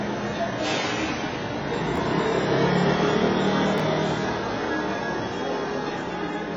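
Across the whole clip the sound is dull and smeared with a fizzy, warbling texture, likely from heavy AAC compression at a low bitrate, around 16 kbps. A spectrogram shows a hard ceiling at 7.6 kHz.

At 1.96 to 1.98 s and again at 3.78 to 3.80 s, chunks out of order cause a brief jumbled stutter. A short slice of about 6 ms plays three slices late, leaving visible step discontinuities in the waveform and thin vertical lines on a spectrogram.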